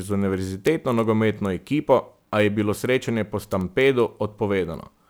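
A single bit flipped in memory or on a digital link three times, producing a bit error spike at 0.67 s, 3.61 s and 4.65 s. Each time, a value jumped by a power of two for two or three samples and then snapped back. It sounds like a sharp, isolated tick, broadband and unrelated to the surrounding speech. At roughly two or three samples, each spike is far too brief to carry any pitch.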